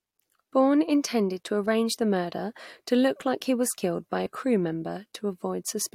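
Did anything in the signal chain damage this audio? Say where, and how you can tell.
Yes. At 4.26 s the speech skips about 10 ms ahead with no gap, likely a dropped buffer (overrun) at the driver stage. The waveform shows a discontinuity, the spectrogram a thin vertical line.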